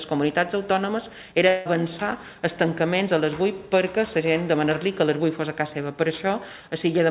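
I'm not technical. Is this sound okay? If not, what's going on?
No. There's a long network dropout from about 1.48 to 1.67 s, likely caused by a break in the connection. For roughly a fifth of a second no fresh audio reached the listener, so the receiving end kept stretching the last bit of sound into a fading buzz to cover the hole. When the sound returns, the part that went missing is simply gone. The call link itself caps the sound at 4 kHz, which gives it a muffled, phone-like tone.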